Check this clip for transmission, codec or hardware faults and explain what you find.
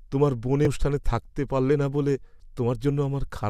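One fault is audible in this speech clip: damaged data in a compressed stream, from 0.65 to 0.67 s. Corrupted bytes made the decoder misread frames and lose sync, producing a brief disruption in the audio.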